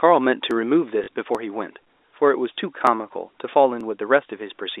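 Dropped samples at 0.51 s give a single sharp click in the speech, a brief tick with nothing audibly missing around it. The likely cause is a gap of a millisecond or two in the sample stream, so the waveform jumps straight from one value to a later one. That step discontinuity is what the ear catches as the click.

Packet loss with the last packet repeated follows from 1.04 to 1.08 s. For 40 ms the receiver had nothing new and replayed the packet it already held until fresh data arrived. The two repeats point to 20 ms packets. Because each replay restarts out of step with the voice's pitch, the stretch takes on a short buzzy, robotic stutter at about 50 Hz, heard through the narrow 300 Hz to 3.7 kHz telephone band of the G.711 A-law line.

Dropped samples return at 1.35 s, 2.87 s and 3.81 s, each the same isolated sharp click as the first, with likely the same jump in the waveform behind it.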